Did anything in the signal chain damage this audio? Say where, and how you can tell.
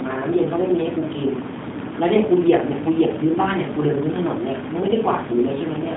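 Yes. The damage happens at the codec stage and runs through the whole speech clip. It is G.729 coding. Nothing is present above 3.8 kHz, and the usable band sits between roughly 150 Hz and 3.6 kHz. The speech sounds plainly rough and synthetic. That fits an 8 kbit/s G.729 stream. The codec does not keep the waveform. It rebuilds each short frame from a vocal tract filter, a pitch predictor and a few pulses.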